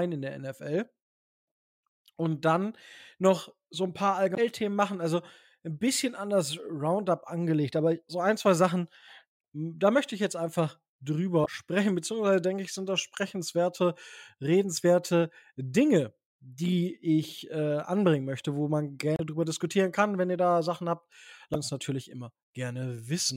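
At 4.35–4.38 s, 11.42–11.46 s, 19.15–19.20 s and 21.51–21.56 s the speech is broken by short glitches, each only 30 to 60 ms long. That's damaged data in a compressed stream: part of the data got corrupted, so the decoder misreads the frames there, loses its footing and hunts for the next valid frame header. The garbage it decodes in the meantime comes out as those brief glitches.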